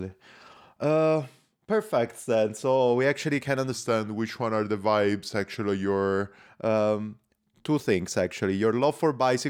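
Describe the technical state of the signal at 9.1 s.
At 9.1 s the speech signal is intact, with no audible technical fault at that moment.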